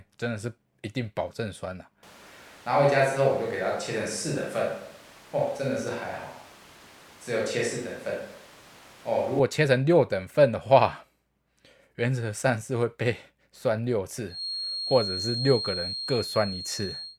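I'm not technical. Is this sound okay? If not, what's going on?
No, there are two problems.

Switch to a distant microphone, from 2.03 to 9.39 seconds: the speech suddenly turns roomy and hollow, loses some of its fullness, and picks up more background room sound, though it stays at about the same loudness. It then snaps back. The likely cause is that the close microphone dropped out for that stretch and a microphone further away, such as a camera's, filled in, hearing the room as much as the speaker.

Feedback whistle, from 14.26 seconds to the end: a thin, steady whistle at about 4.2 kHz sits behind the speech, quieter than the speech, slowly swelling and fading in level. It likely comes from a loudspeaker feeding back into a microphone, with the loop sitting just at the edge of runaway feedback so that one high pitch keeps ringing without growing into a full howl.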